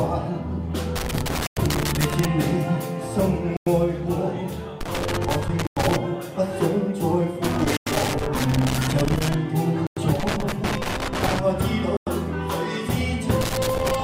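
Loose connector crackle first appears from 0.96 to 2.25 s: a ragged burst of scratching as a worn or dirty contact makes and breaks. It returns from 4.81 to 5.96 s, 7.44 to 9.34 s, 10.20 to 11.39 s, and from 13.41 s to the end. Unlike the other faults here, it comes at irregular times and lasts much longer. Its texture is a rough, uneven crackle, not clean silence or a single blip.

Inside the first burst, at 1.47 s, is the first gap between chunks: a 100 ms hole. More follow at 3.57, 5.67, 7.77, 9.87 and 11.97 s, exactly 2.1 s apart. The audio is being delivered in 2-second pieces with silence left at each join. No sound is lost; it is only held back. The strict regular spacing and the identical length of each dropout show it is not the connector. A connector cuts out at random and crackles, while these holes are simply clean silence.

At 11.6 s there are compressed frames skipped. The audio jumps forward by about 20 ms, which fits one dropped frame of about 21.3 ms. 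About 20 ms of audio is missing, and this skip is much shorter than the 100 ms holes.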